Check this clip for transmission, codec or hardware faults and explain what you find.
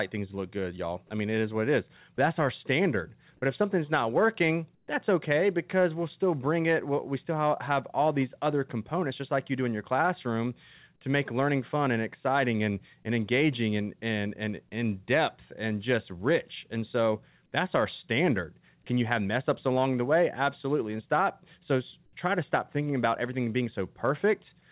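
Two brief faults turn up, both tied to the sender's voice activity detection, heard through a call path whose narrowband coding leaves nothing above 4 kHz.

At 2.17 s, just before "that's our standard", there is sound dropped by the voice detector. The sender's detector likely mistook a quiet stretch of speech for background and stopped transmitting, so the receiver filled the gap with comfort noise. About 10 ms of real sound is replaced by flat synthetic noise, a tiny hiccup in the speech.

From 4.75 to 4.88 s, between "if something's not working" and "that's okay because we'll", comfort noise replaces the background. The sender likely paused transmission during the gap in speech, and the receiver substituted generated noise for the real ambience, which sits about 42 dB below the loudest passages. For 130 ms the background turns smooth and featureless and drops by about 6 dB before the real room sound returns.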